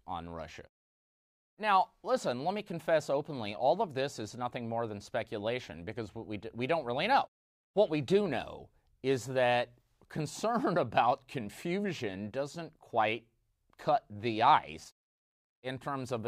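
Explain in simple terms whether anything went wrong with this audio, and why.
Listening to this speech recording, nothing stood out as having gone wrong with the sound.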